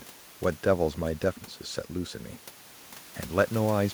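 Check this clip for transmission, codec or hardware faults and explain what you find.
No transmission, codec or hardware faults can be heard in the speech; the only other sound is the room's background noise, which sits about 20 dB below the voice and belongs to the recording itself.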